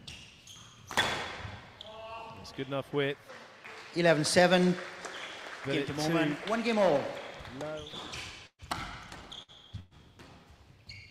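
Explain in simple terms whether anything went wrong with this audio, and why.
Four bursts of packet loss: short runs of network packets arrived too late or not at all, near 7.87, 8.47, 9.42 and 9.79 seconds. Each time the player stretched and faded the last sound to cover the gap, then jumped ahead, skipping about 60 to 120 ms of audio.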